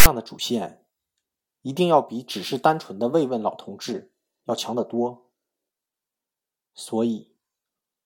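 File tags played as audio, 0.00 to 0.06 s: text tag bytes decoded as samples give a loud rasp, offset to one side, with abrupt edges.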